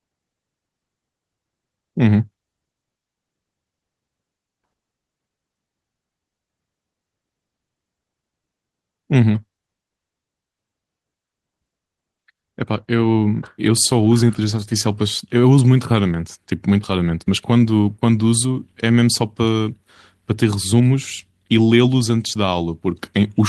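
Speech over a WebRTC call path, its top end stopping around 12 kHz in a way that fits an Opus stream at about 20 kbps, with no faults to report.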